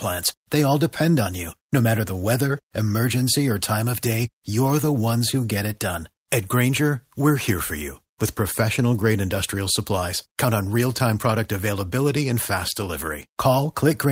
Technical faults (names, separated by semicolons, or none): none